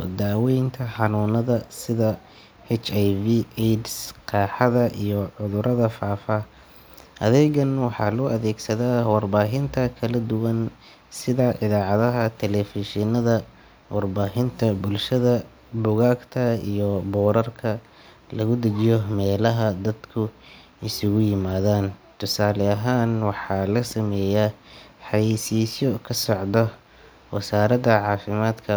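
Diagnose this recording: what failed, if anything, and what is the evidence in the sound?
Nothing stood out on listening: no stage of the chain, from wiring and conversion through processing, storage and playback, left anything audible to point to in this speech recording.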